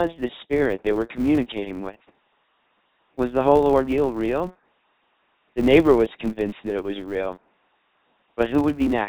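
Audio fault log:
throughout: LPC-10 vocoder. The speech has a buzzy, mechanical robot quality, with heavy codec damage consistent with a 2.4 kbit/s LPC-10 stream. Each moment is rebuilt from either a pulse train or noise through a short all-pole filter, so voiced stretches buzz and unvoiced ones hiss. On a spectrogram, voiced regions show rigid, evenly spaced harmonics with smeared formants, and unvoiced regions show flat noise bands.
throughout: filter restarted on every block. A steady 200 Hz buzz rides on the signal and rises and falls with its level. A filter dropping its memory at each block boundary starts from silence every time, leaving a small transient at each restart. The buzz rate points to blocks about 5 ms long. The waveform shows tiny regular discontinuities at every boundary, and the spectrogram shows a horizontal line at 200 Hz with its harmonics that strengthens in louder passages.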